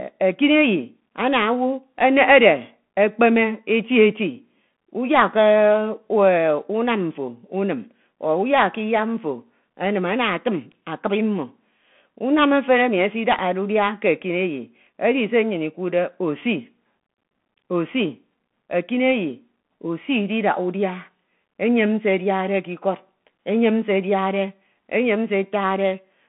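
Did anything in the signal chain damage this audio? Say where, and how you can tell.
Yes. The damage comes at the codec stage, through a Bluetooth CVSD headset codec, throughout the speech. Nothing passes above 3.8 kHz, the line band runs roughly 150 Hz to 3.5 kHz, and s sounds turn scratchy over a granular hiss, which fits one-bit delta coding at 64 kbps.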